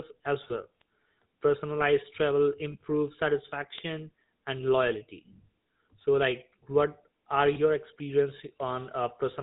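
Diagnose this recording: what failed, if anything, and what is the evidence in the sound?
Codec stage: the GSM full-rate codec gives the whole clip a buzzy, gravelly roughness and removes everything above 4 kHz, consistent with 13 kbps. Pulse-driven excitation causes this grain, which sets it apart from simple band-limiting.

Network stage: lost GSM frames at 0.48 s (ringing until 0.68 s), 2.72 s and 7.54 s. Each is a brief metallic ring where the last good frame is repeated, not a click or a silent gap.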